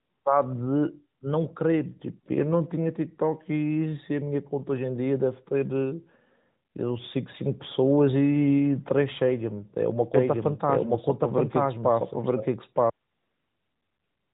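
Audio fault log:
10.14–12.90 s, doubled audio track: a full-band copy at about equal level trails by about a second and starts and stops abruptly, likely a second, slower capture path.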